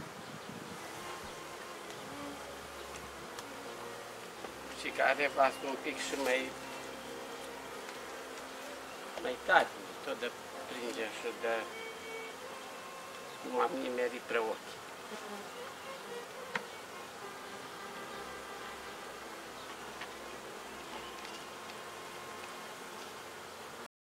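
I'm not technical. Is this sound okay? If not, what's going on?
No, it has a cut-off end: at 23.86 s the sound stops mid-way and drops straight to silence, with none of the natural fade a real ending has.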